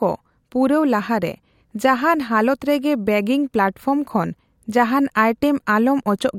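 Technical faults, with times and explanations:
Nothing technical stands out in this speech recording; it simply runs along without any fault catching the ear.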